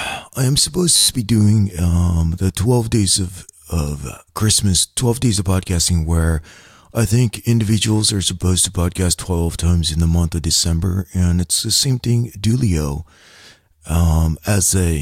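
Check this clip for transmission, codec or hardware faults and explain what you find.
A brief steady buzz at 100 Hz runs from 0.96 to 1.08 s. It is a system hang loop: the driver stalled while the hardware replayed one 10 ms buffer about twelve times.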